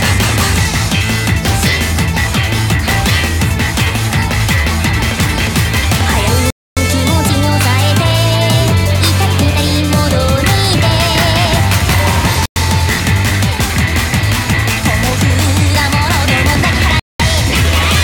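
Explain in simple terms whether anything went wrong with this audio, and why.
The sound cuts to silence three times: at 6.50–6.77 s, 12.46–12.56 s and 17.00–17.20 s. This is likely a Bluetooth stall, where delayed wireless data briefly starved the headphones.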